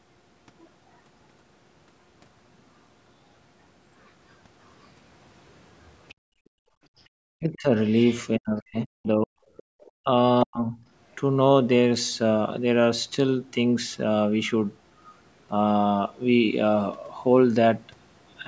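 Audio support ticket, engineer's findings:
Residual echo, other side's voice leaking through, likely from the echo canceller under-suppressing the loudspeaker path. A faint second voice at 6.09–6.14 s, 6.98–8.17 s and 9.57–9.91 s, roughly 25 to 30 dB under the talker.

Echo canceller suppression clamping the mic during far-end playback, so the background is gated by the echo canceller. Room tone drops out at 6.14–6.93 s, about 31 dB down, and briefly at 9.65–9.74 s, about 33 dB down, then recovers.

Double-talk handling fault, speech suppressed in double talk, likely from the canceller mistaking the near-end talker for echo while both sides overlap. The talker's voice dips at 7.3–7.71 s, 8.38–9.37 s and 10.02–10.76 s, by roughly 40 dB.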